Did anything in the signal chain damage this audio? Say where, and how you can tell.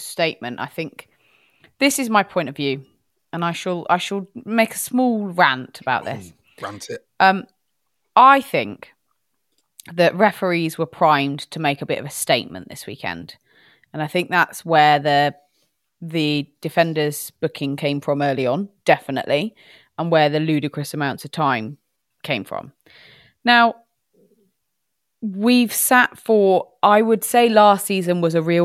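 No, nothing along the chain seems to have left a mark on this speech recording, and there's no point where anything jumps out as having gone wrong on its way here.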